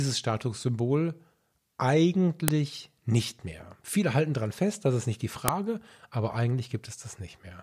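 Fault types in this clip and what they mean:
File header played as audio: the clip is speech stitched from 3-second pieces whose WAV headers were left in, so a few dozen bytes of file metadata play as if they were sound. Each join gives a sharp, loud snap, at 2.48 s and at 5.48 s just after "das ist nicht die". Unlike an ordinary splice discontinuity, the click is a burst of foreign data rather than a small waveform step, and it is equally loud whatever the speech is doing.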